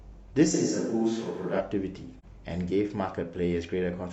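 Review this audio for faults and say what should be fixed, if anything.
From 0.55 to 1.59 s the speech turns roomy and hollow with thinner bass, likely a switch to a distant microphone; level barely changes, with room noise roughly 35 dB down. Keep the close microphone monitored and its connection secured so the recording never falls back to the far pickup.

At 2.19 to 2.25 s there is a soft-edged gap of about 43 ms, AAC frame loss with muting. The sound fades out and back in, consistent with one frame zeroed by the decoder. Carry the stream over a reliable or error-protected link so no frames are lost before decoding.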